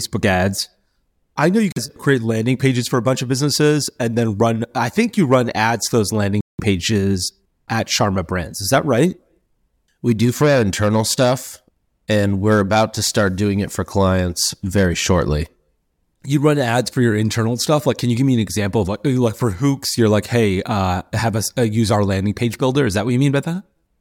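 Speech that twice drops to dead silence for a moment, at 1.72 to 1.78 s with about 43 ms of silence and at 6.41 to 6.60 s with about 182 ms, then carries on. This is a Bluetooth stall, likely from radio interference delaying packets until the headphones' buffer emptied and playback waited for retransmissions. The waveform shows flat-line gaps, and the spectrogram shows full-height blank vertical bands at those points.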